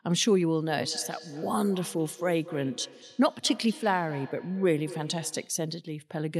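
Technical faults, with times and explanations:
0.69–5.67 s, feedback echo between two devices: a nearby device replays the call into the other's microphone, so the speech returns about a fifth of a second later, peaking about 16 dB below.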